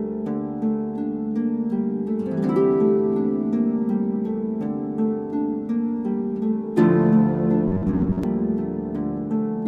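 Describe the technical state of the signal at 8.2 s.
At 8.2 s you're right inside a stretch of robotic sound from repeated short buffers, running from about 7.68 to 8.24 s. It likely comes from audio arriving too slowly, so a snippet of roughly 10.7 ms keeps getting replayed while real material is dropped, with about half the signal being repeats. That loop stamps a fixed buzz at about 93.8 Hz over everything, giving a stiff, metallic tone that only loosely tracks the underlying sound.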